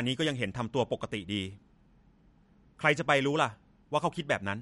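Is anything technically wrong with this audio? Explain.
Yes. Throughout, nothing comes through above 11.2 kHz and the sound is plainly watery and swirly, likely MP3 compression at a starved bitrate, roughly 56 kbps, dropping weak frequency lines.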